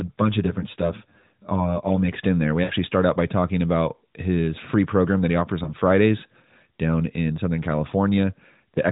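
Speech carried over a narrowband mobile link, with everything above 4 kHz gone and a light codec coarseness that suggests a fairly high AMR-NB rate. From 0.00 to 2.13 s, just before "in there", channel delay (comb filtering) makes the sound hollow and phasey: one channel lags by around 10 ms, and summing to mono cuts notches starting near 50 Hz. Lost AMR speech frames produce brief dropouts at 2.64 to 2.72 s, before "start out by talking", at 5.64 to 5.72 s, after "program that he offers", and at 7.88 to 7.91 s. The decoder fills each gap with fading repeats of the last good frame, and the first dropout is long enough to span about three 20 ms frames.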